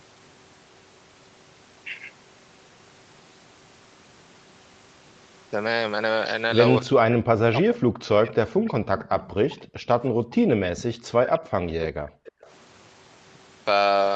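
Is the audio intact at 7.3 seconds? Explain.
No. At 7.3 seconds the speech is being pushed down hard. From 6.83 to 9.63 s it dips, loses its upper range and breaks into fragments, falling by roughly 40 dB at its deepest. This is likely speech suppressed in double talk: with both ends talking at once, the echo canceller could not tell this talker apart from the returning loudspeaker echo, so it attenuated everything together rather than risk letting echo through.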